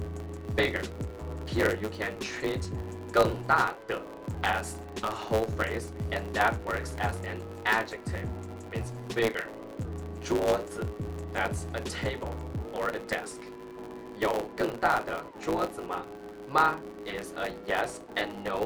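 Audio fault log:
Throughout, block size mismatch (truncated): each block's tail gets dropped, so there's a 109 Hz buzz at the block rate and everything runs 1.09x fast at roughly normal pitch.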